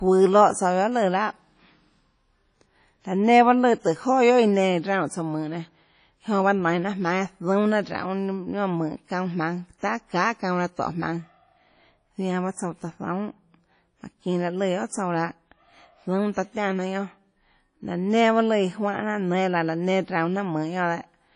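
Low-bitrate transform coding, likely WMA compression at around 32 kbps, runs through the whole speech clip, zeroing weak spectral lines and smearing quantisation noise across long blocks. Nothing survives above about 10.1 kHz, and the sound rings and washes, with hiss breathing alongside the signal.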